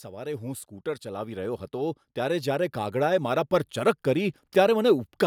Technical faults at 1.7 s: automatic gain rising

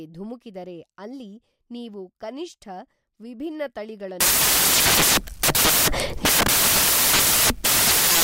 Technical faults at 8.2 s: samples built from the wrong bytes

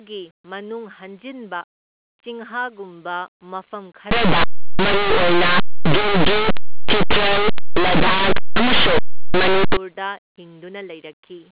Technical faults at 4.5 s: linear audio read as companded

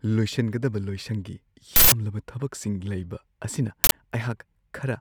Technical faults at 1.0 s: none

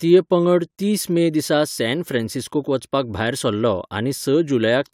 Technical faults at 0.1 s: none

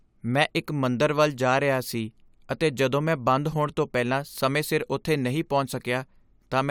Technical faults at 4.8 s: none

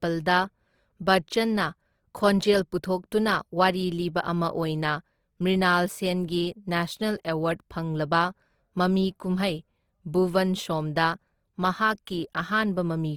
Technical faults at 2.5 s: Opus compression

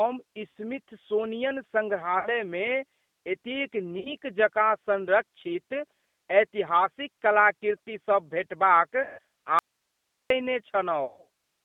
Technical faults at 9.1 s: G.729 codec; VoIP packet loss concealed by the speech codec

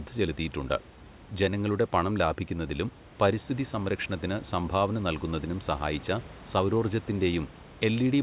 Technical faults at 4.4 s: none

